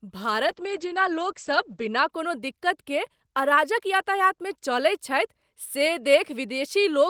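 A call bitrate drop runs from 0.47 to 2.15 s in this speech clip. The encoder's rate falls from 32 to 12 kbps for about 1.4 s. Coding turns coarse and the top end is cut from 20 kHz to 8 kHz, so the sound goes rough and muffled before recovering.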